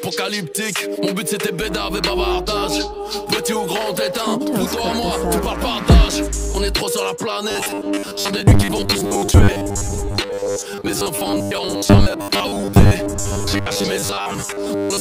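From 7.51 s to the end of the audio at 15.00 s, the sound takes on a robotic sound from repeated short buffers: a rigid, metallic buzz fixed at 100 Hz. That pitch points to one 10 ms stretch being looped whenever fresh audio is late, likely from starved delivery, with roughly half the material replaced by repeats. Unlike a comb-filter or flanger colouring, the pitch never sweeps, and real content is skipped rather than merely tinted.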